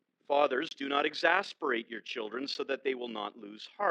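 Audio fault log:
throughout: overlap-add ripple. The frames were recombined with an overlap whose window gains do not sum to a constant, so the level swings by about 6 dB once per frame, at around 40 Hz. This produces a rough, buzzy tremolo over the whole sound.
0.69–0.71 s and 2.54 s: block of digital silence. The audio drops abruptly to silence for 23.65 ms, then for 10 ms, and returns with no fade. The first is a short hole and the second a tick.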